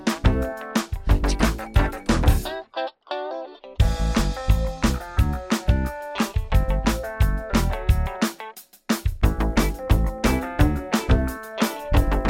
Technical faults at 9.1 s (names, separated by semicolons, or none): none